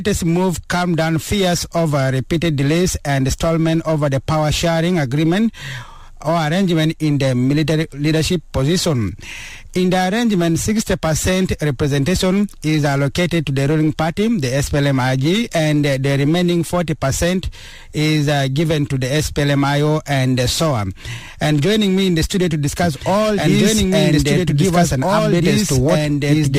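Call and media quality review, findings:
Doubled audio track from 22.83 s to end of clip. Second full-band copy enters abruptly, trailing by roughly two seconds, about equal level. No decay or room colour on the copy. Likely cause: second capture on a slower path.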